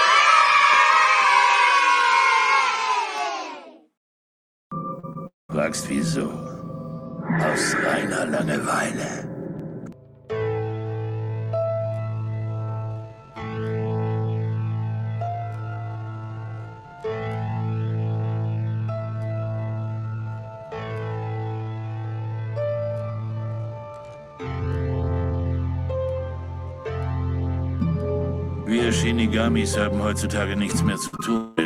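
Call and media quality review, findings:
Short concealed packet loss at 4.99–5.05 s (about 40 ms missing), 5.13–5.17 s and 31.17–31.21 s (20 ms each). Jitter buffer/decoder never got those frames; concealment extended the preceding sound and crossfaded back. Heard as brief smears or wobbles.

Long network dropout at 5.27–5.51 s and 31.37–31.59 s, likely from a transport outage. Roughly 0.2 s of audio lost each time. Concealment buzz/hiss fades out; at 5.3 s about 0.17 s of silence follows before audio resumes further on, while at 31.4 s the fill runs straight into the resumed audio.

Time-stretched section from 10.94 s to 25.52 s, likely from a length-fitting step in the media pipeline. Playback slowed to about 0.52× with pitch preserved by repeating short segments. Sudden drop in pace at onset; the whole span drags.

Burst of packet loss at 31.07–31.15 s, about 60 ms of consecutive packets lost or late. 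Receiver continued the last sound and attenuated it across the gap, giving a short fading held buzz or hiss, then a jump forward where the audio resumes.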